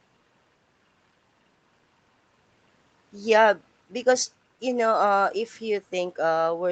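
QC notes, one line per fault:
No faults found in this speech clip.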